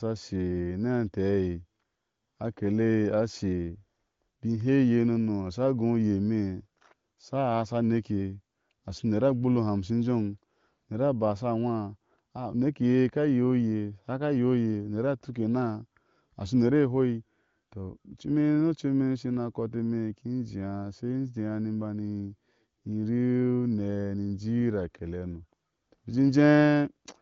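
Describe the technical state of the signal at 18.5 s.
At 18.5 s the signal is intact, with no fault to hear, and the AMR wideband (HD Voice) path at about 18.25 kbit/s leaves only faint coding traces at most, with nothing above roughly 7.5 kHz.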